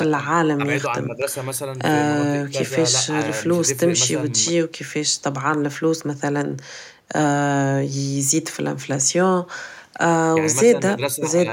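No technical faults are audible.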